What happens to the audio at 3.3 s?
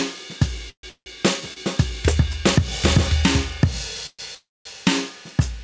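At 3.3 s the music is caught in gain pumping, which runs through the whole clip. The level breathes by around 5 dB, with loud and soft parts pushed closer together, likely because the input gain is set too high and a fast limiter keeps clamping it down. On the waveform the envelope looks flattened, with rising and falling ramps between peaks. On a spectrogram, quieter bands brighten and dim in step with the loud events, all below the G.722 call codec's 8 kHz ceiling.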